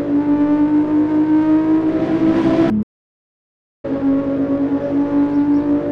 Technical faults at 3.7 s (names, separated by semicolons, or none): playback stall